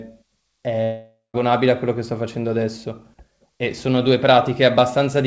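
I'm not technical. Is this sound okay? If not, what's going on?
No. From 0.84 to 1.36 s the speech breaks off: the last sound is stretched into a fading buzz, then there is a short stretch of silence before the speech picks up again, with about half a second missing. This is likely a long network dropout, where the call connection stopped delivering audio, so the receiving end filled the gap with a guess and then gave up. The call's sound itself, which carries nothing above 8 kHz, comes through as a normal call would.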